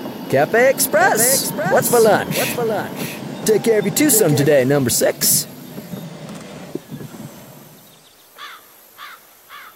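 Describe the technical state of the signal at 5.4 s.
At 5.4 s the signal is intact, with no dropout, clipping, glitch or other technical fault at that moment.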